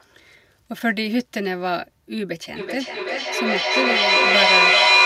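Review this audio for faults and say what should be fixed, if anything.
Feedback echo between two devices runs from 2.56 s to 5.05 s. The speech loops back roughly every 0.4 s and builds to about 8 dB above the speech instead of fading. On a waveform this shows as stacked, swelling copies, and on a spectrogram as evenly spaced, smeared bands. To prevent it, keep only one device's microphone and speaker active in the room.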